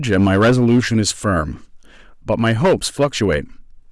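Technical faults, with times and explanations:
Throughout, hard clipping: the speech is pushed about 8 dB past what the chain can pass, so a few percent of samples are sheared flat at the ceiling. Those square tops spray high harmonics, a harsh fuzz on louder syllables, unlike soft saturation's rounded, warmer thickening.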